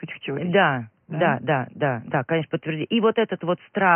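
No technical faults can be heard in the speech, and the faint room noise sits about 49 dB below it as an ordinary part of the recording.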